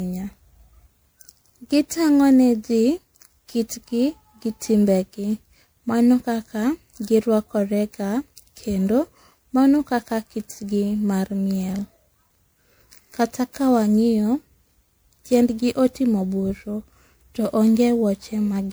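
Generation loss runs throughout the speech. It sounds swirly, smeared and hollow, with blurred attacks, likely from roughly seven passes through an MP3 encoder near 128 kbit/s.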